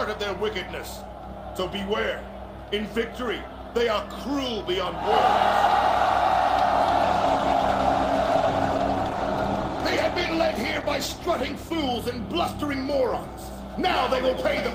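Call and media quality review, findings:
Call bitrate drop, 7.04–11.89 s. Sound turns coarse and dulled as the encoder falls from 48 to 17 kbps, holding the floor for about 4.8 s. Fewer bits mean rougher quantisation and lost top end until the bandwidth estimate recovers.

Doubled audio track, 13.42 s to end. A dry full-band copy appears abruptly, around a tenth of a second behind and roughly 5 dB quieter, with no room tail. Likely a second, slower capture path mixed in alongside the original.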